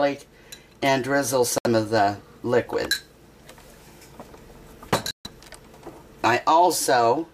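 At 1.58 s the audio drops abruptly into silence for about 88 ms, and at 5.11 s it does so again for about 160 ms. Both are corrupt frame muted faults: damaged compressed frames were rejected by the decoder and replaced with silence. The gap lengths suggest a few frames of roughly 27 to 29 ms each. A waveform shows flat silent gaps with hard edges, and a spectrogram shows blank vertical bands across all frequencies. The surrounding timing stays intact.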